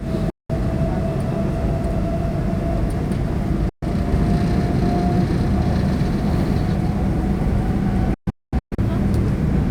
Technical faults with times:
0.30-0.50 digital broadcast dropout
3.69-3.83 digital broadcast dropout
4.12-6.76 doubled audio track
8.14-8.79 digital broadcast dropout

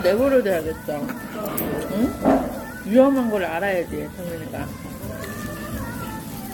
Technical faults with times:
0.00-6.54 generation loss

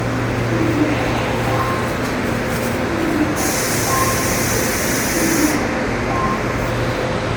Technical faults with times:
0.00-7.37 generation loss

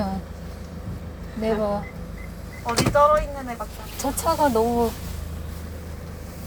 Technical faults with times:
none

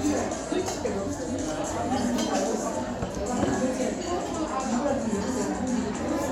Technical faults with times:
none

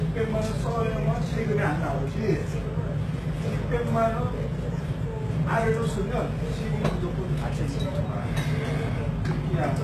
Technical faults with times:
0.00-9.83 sample clock jitter
0.00-9.83 HE-AAC compression

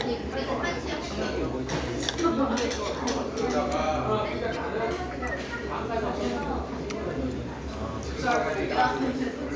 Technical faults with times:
none

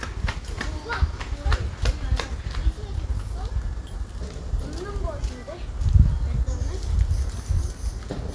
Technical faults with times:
0.00-8.35 aliasing

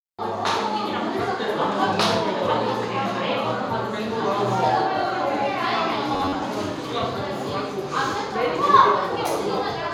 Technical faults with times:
6.14-6.45 robotic sound from repeated short buffers

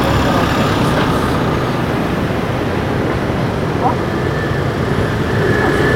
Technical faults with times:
none

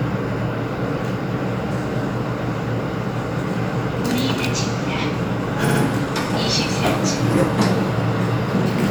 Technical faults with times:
5.68-5.81 repeated frames

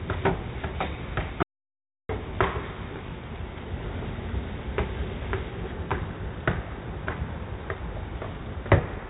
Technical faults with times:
0.00-9.09 4-bit ADPCM compression
1.43-2.09 audio dropout to silence

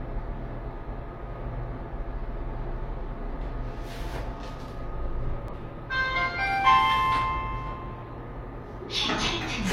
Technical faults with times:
1.77-1.79 damaged data in a compressed stream
5.48-5.54 damaged data in a compressed stream

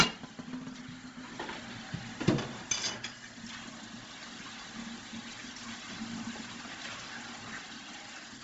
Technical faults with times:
0.00-8.44 Bluetooth LC3 compression

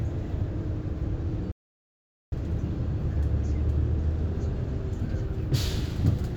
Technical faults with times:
1.52-2.32 audio dropout to silence

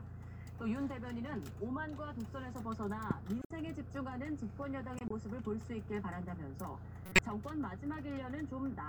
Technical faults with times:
3.41-3.51 corrupt frame decoded
4.98-5.11 corrupt frame decoded
7.06-7.19 corrupt frame decoded

